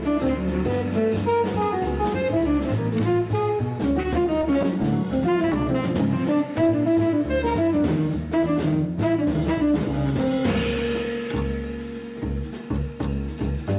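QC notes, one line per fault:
3.74–4.85 s, repeated stalls (stutter): the jitter buffer ran dry eleven times, and each gap (longest 14 ms) was bridged by continuing the last sound, 111 ms filled with nothing lost, so the audio drags and judders. The waveform shows short repeated-cycle patches, and the spectrogram shows brief horizontally smeared patches.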